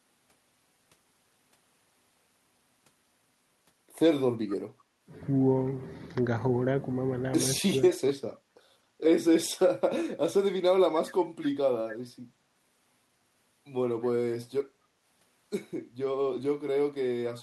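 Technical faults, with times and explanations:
4.48–4.57 s, 8.29–8.35 s and 17.33–17.38 s: echo leak. Brief scraps of a faint copy of the speech return 245 ms late, roughly 25 to 35 dB below the talker. A far-end loudspeaker echo canceller likely failed to remove all of its microphone's pickup and sent the residue back.
7.61–7.76 s: speech suppressed in double talk. For about 150 ms the talker's level sags by as much as roughly 20 dB while both sides overlap. An echo canceller likely could not tell local speech from loudspeaker echo and turned both down.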